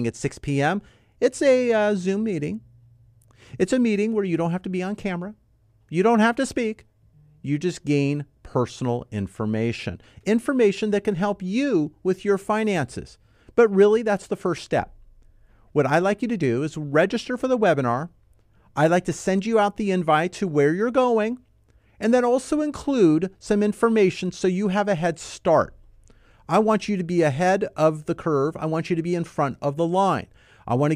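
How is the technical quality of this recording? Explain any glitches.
Nothing stood out as a technical problem on listening to this speech recording.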